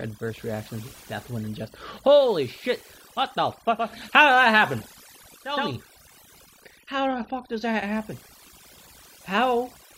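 Throughout the clip the background sits at near silence flecked with twinkling specks. That is overdone noise removal: the noise reduction was set so hard that bands near its noise estimate were pulled down or cut, taking quiet parts of the voice with them.

From 3.70 s to 5.73 s a faint hiss rises well below the speech, and the level shifts by about 4 dB. This is a digital radio blending to analogue: the receiver lost the digital stream and cross-faded over about 353 ms to the station's FM broadcast, then faded back.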